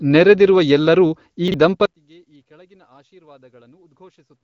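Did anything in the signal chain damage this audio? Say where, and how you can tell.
Yes. From 1.48 to 1.54 s, just after "ನೆರೆದಿರುವ ಎಲ್ಲರೂ ಈ", the speech jumbles briefly. A 20 ms chunk arrived two chunks late: chunks out of order in buffering or network.

From 1.86 s to the end, the speech abruptly drops about 33 dB. The likely cause is one channel inverted in wiring or playback, cancelling centred content when summed to mono.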